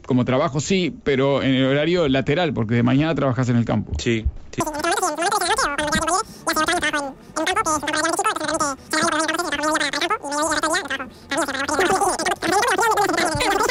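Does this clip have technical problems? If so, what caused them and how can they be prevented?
Yes. From 4.60 s through to the end, there's a wrong sample rate problem: the sound suddenly runs three times too fast, with pitch jumping about 19 semitones, so it turns squeaky and rushed. That's what you get when samples are handed to the output at a higher rate than they were captured at, with no conversion in between. A 3:1 ratio fits 16 kHz material being played out at 48 kHz. To prevent it, check the stream's rate at every handoff and resample whenever the source and the device don't match.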